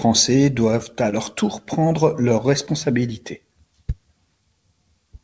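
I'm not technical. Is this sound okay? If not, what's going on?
No. There are two brief short concealed packet losses in this speech. Tiny bits of audio arrived too late. The receiver invented filler, heard as a quick smear at 1.10 to 1.14 s, right after "doivent à", and at 2.66 to 2.69 s, just after "tour prendre leurs".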